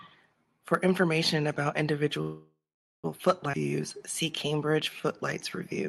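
A speech recording carried over a call path, band-limited at about 12 kHz, with three faults. Right after "information about", at 2.21 s, the audio stalls: the last sound lingers as a fading buzz or hiss, then about 0.45 s of silence, before speech resumes at 3.06 s with nothing lost. This call audio freeze, roughly 0.82 s in total, is likely packets held up in transit until the jitter buffer ran dry. Just after, at 3.52 to 3.55 s, the audio jumps forward, dropping around 0.4 s and splicing the two sides almost directly. This skip ahead comes from a stretch being discarded, on the way or by the jitter buffer when it overflowed, while later audio was already waiting. From 3.58 to 5.70 s the speech then drags at about 91% speed with unchanged pitch, sounds drawn out. This jitter buffer slow-down comes from the receiver repeating single pitch periods and pause fragments to rebuild its reserve, adding about 0.21 s in all.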